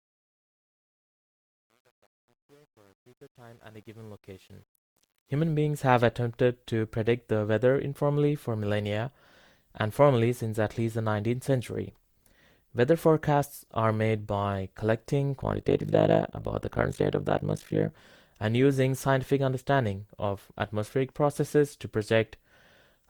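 Right from the start, the whole speech clip has a swirly, smeared, hollow quality, and consonant attacks blur more than a single pass at 64 kbit/s would account for. That points to generation loss, likely from being decoded and re-encoded through Opus about five times. Each pass quantises on a fresh frame grid, so the noise piles up. The top end still reaches to around 20.1 kHz, so it's the smearing, not dullness, that gives it away.

Over the first 5.53 s, the quiet part of the fade-in shows truncation distortion on a fade. From 0 to about 4.72 s especially, the low-level sound turns gritty. The gain stage seems to keep only around 9 bits with no dither, so near the bottom the waveform collapses into a few coarse square steps.

From 15.4 to 17.92 s there's overlap-add ripple: a fast, rough tremolo at roughly 50 Hz. The frames were windowed and overlapped in a way that doesn't sum to constant gain, so the level dips once per frame. 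Those dips are very deep, about 60 dB, which is why the effect is such a harsh flutter rather than a subtle wobble.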